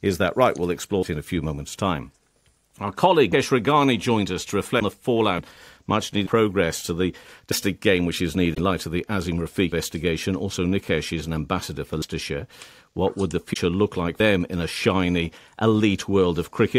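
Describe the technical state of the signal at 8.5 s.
At 8.53 to 8.59 s the audio skips ahead with a brief glitch. A broken MP3 bit reservoir is likely: frames after a cut read another frame's bytes.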